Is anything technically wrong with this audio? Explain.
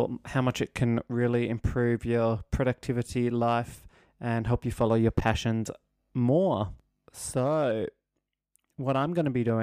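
No, nothing in this speech recording points to a technical fault.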